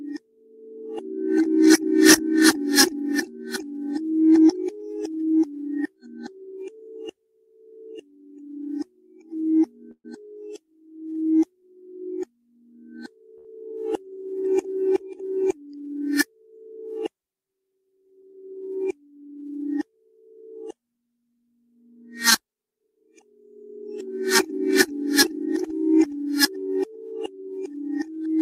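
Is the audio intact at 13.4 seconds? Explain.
No. A short stall from a late packet hits 13.38 to 13.47 s. The receiver holds the last sound for 67 ms, then resumes without loss.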